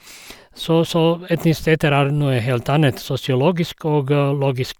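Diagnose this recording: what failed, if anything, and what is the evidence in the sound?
Nothing failed; no fault is audible anywhere here.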